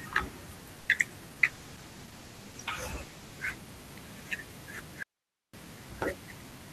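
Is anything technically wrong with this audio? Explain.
Yes, there are four distinct faults.

From 0.79 to 1.12 s there is repeated packet loss that gives a robotic sound. Four short holes, the longest about 90 ms, are patched by extending the preceding sound. Nearly 40% of that span is concealed rather than real, so it comes out choppy and robotic.

From 1.23 to 1.41 s a jitter buffer slow-down is audible. The receiver repeats single pitch periods to rebuild its reserve, adding about 36 ms. Playback runs at roughly 84% speed with the pitch unchanged, so sounds are drawn out.

From 1.41 to 3.64 s there is a call bitrate drop. The encoder is starved of bits after the bandwidth estimate falls, and the coarser coding, consistent with a fall from around 40 to 15 kbps, makes the speech rough and muffled for about 2.2 s.

From 5.03 to 5.54 s there is an audio dropout to a faint residue. The signal cuts out abruptly for about half a second, leaving only hiss around 50 dB below normal level. 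This is likely a break upstream while the later path stays live.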